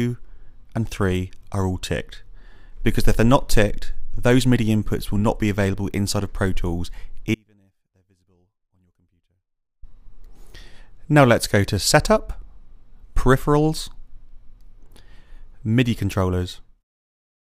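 From 7.35 to 9.83 s the signal was likely lost while the path stayed live, an audio dropout to a faint residue: sound cuts abruptly to a trace roughly 40 dB down, then returns.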